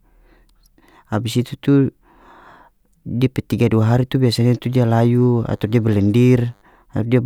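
From 4.61 to 6.61 s, right after "dua hari tu biasanya", a faint DECT cordless phone buzz sits well below the speech: a nearby handset's 100 Hz radio bursts get rectified into the audio, giving a thin, harmonic-rich rasp rather than mains hum's smoother 50 or 60 Hz drone.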